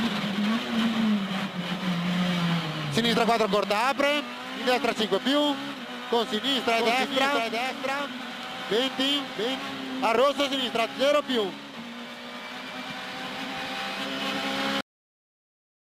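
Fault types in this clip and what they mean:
Doubled audio track: from 6.57 to 9.63 s, a dry copy about 5 dB quieter trails roughly 0.7 s behind and starts and stops abruptly, likely from a slower second capture path.
Cut-off end: at 14.81 s the sound stops mid-event and drops straight to digital silence with no decay, because the final buffers were never written or played.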